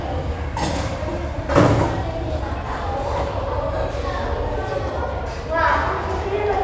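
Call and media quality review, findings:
No faults found in the sound recording. Nothing here calls for a ticket entry.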